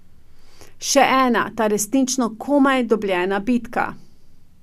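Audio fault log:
No audible faults found.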